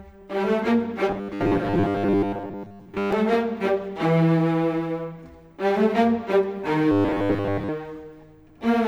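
From 1.09 to 3.13 s and again from 6.92 to 7.70 s, robotic sound from repeated short buffers: a rigid, metallic buzz fixed at 100 Hz. The likely cause is a roughly 10 ms buffer replayed to fill gaps while most of the real audio is skipped.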